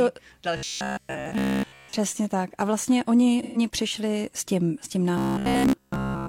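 From 0.57 to 1.93 s the speech turns into a rigid, metallic drone at a fixed 66.7 Hz. This is robotic sound from repeated short buffers. The likely cause is audio arriving too slowly, so playback loops the last snippet of about 15 ms while most of the real signal in this stretch, around 70 percent, is skipped. That 15 ms period sets the pitch of the buzz. The speech contour still shows through only roughly. The same fault returns from 5.18 s to the end of the clip, and there essentially all of the audio is replaced by repeats. The steady, pitched tone is what sets this fault apart from a codec dropout.

Between 3.42 and 3.58 s there is AAC frame loss with concealment. For 128 ms, a span that fits about three lost frames, the decoder rebuilds the sound from the last good spectrum. The result is a brief smeared, phasey and noisy patch. Unlike the robotic passages, it carries no fixed imposed pitch and has no looping quality, only a blurred gap where the detail of the sound dissolves.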